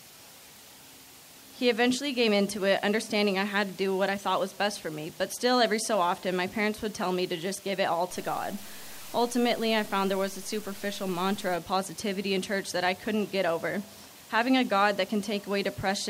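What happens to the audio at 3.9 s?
Nothing goes wrong at 3.9 s, and the audio plays through that moment intact.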